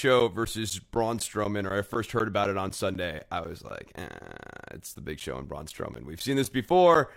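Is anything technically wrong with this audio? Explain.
Yes. Periodic USB or driver dropouts run from 0.2 s to 6.95 s: every 0.25 s something stalls the USB bus or audio driver, and roughly 10 ms of speech is replaced by silence, about thirty times, heard as evenly spaced ticks riding on the speech.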